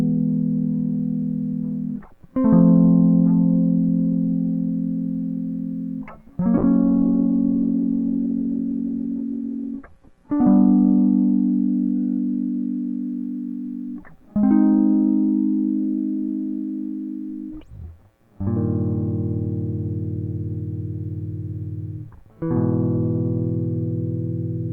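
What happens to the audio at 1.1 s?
At 1.1 s the music plays through intact, with no dropout, click, distortion or other fault at that moment.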